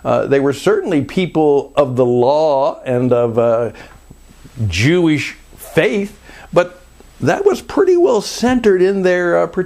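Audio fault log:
Nothing faulty turns up anywhere in the audio. There are no times to log.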